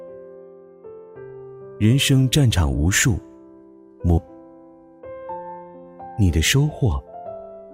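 At 4.17 s to 4.20 s the audio jumps abruptly forward, with a brief blip of about 30 ms at the join where the sound before and after does not line up. The discontinuity suggests a stream segment skipped: one chunk of a segmented stream likely failed to arrive or decode, and the player moved straight on to the next segment, so part of the programme is missing rather than delayed or repeated.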